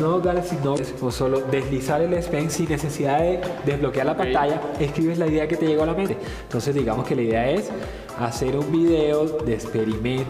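At 0.75 s and again at 6.05 s there's damaged data in the compressed stream: a short glitch of about 50 ms, then 40 ms. Bad bytes there made the decoder misread those frames and lose sync until it found the next frame header.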